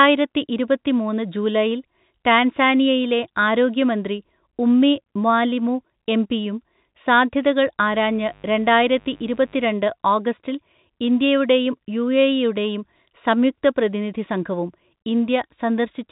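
A steady, raspy buzz sits under the speech from 7.87 to 9.71 s, well below the voice, roughly 30 dB down. This is mains buzz: sharp switching spikes on a 50 Hz supply put a dense stack of harmonics into the signal, and they are heard even through the telephone-band G.711 coding that carries this speech clip.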